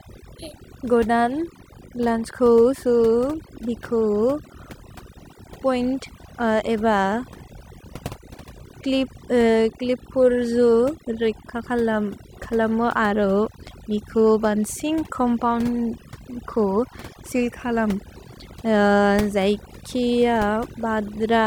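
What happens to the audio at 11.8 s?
At 11.8 s the speech carries overdone noise removal, which runs through the entire clip rather than starting there. A noise reduction stage set far too hard pulls individual frequency bands down to nothing whenever they sit close to its noise estimate, so the quiet parts of the voice vanish with the noise. The background drops and breaks up into twinkling specks. Unlike a plain low-pass cut, the loss comes and goes band by band.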